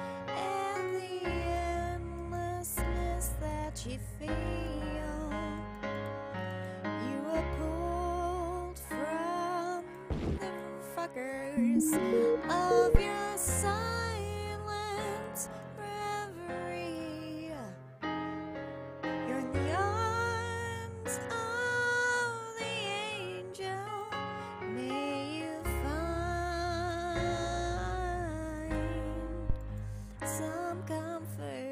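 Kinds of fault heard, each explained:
Phantom power thump: two deep thumps, at 12.95–13.01 s peaking at about -8 dBFS and at 29.50–29.57 s at about -17 dBFS, each fading within 14 to 17 ms. Switching a supply on or off at the live input pushes a voltage step through the coupling capacitors.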